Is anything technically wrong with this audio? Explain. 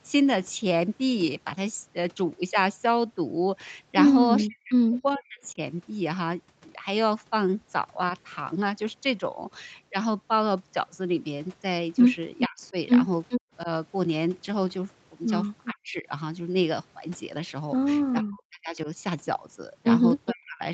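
Yes. There are two linked call-path faults: echo leaking back and speech being suppressed while both sides talk.

Echo leak: At 4.40 to 4.44 s, and again from 12.38 to 20.31 s, the far end's echo canceller likely failed to remove its loudspeaker pickup. A copy of the speech returns about 0.42 s late, briefly at about 20 dB below the speech and later almost as loud, at about 5 dB below.

Speech suppressed in double talk: From 4.46 to 5.58 s, and from 12.48 s to the end at 20.73 s, the canceller could not separate the talker from the echo and likely turned both down. The speech dips by as much as about 40 dB. In the first stretch it is affected for roughly 0.7 s in total.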